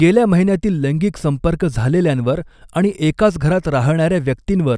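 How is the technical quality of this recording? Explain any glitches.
No glitches or technical faults can be heard anywhere in the recording, and the speech signal stays intact and continuous throughout.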